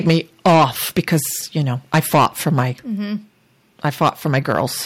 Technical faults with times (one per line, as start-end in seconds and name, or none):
0.07-0.17 microphone overload
0.11 microphone volume stepped down
0.45-0.65 microphone overload
0.96-1.17 microphone overload
1.94-2.63 microphone overload
3.18 microphone volume stepped down
3.85-4.61 microphone overload